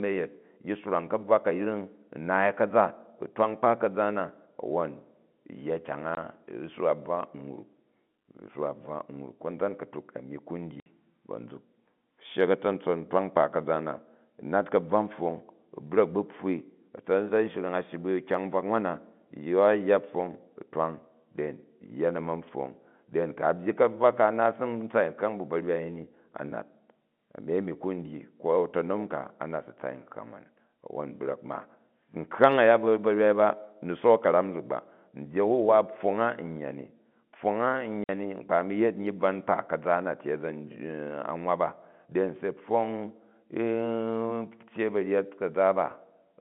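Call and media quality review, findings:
Packet loss filled with silence: speech dropouts at 6.15–6.17 s (20 ms), 10.80–10.86 s (60 ms) and 38.04–38.09 s (50 ms). Lost packets replaced with silence, no concealment. Gap lengths are multiples of 10 ms, which fits 10 ms packets. Hard edges. On the waveform these are flat near-silent runs with abrupt cutoffs. On the spectrogram they are blank vertical stripes cutting across the G.711 telephone band that tops out near 3.5 kHz.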